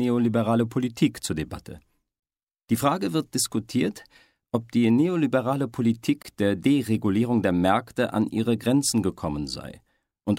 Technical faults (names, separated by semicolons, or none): gap between chunks